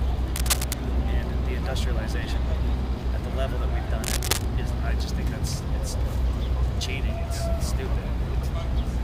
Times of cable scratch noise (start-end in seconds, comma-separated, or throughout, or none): 0.36-0.73, 4.04-4.47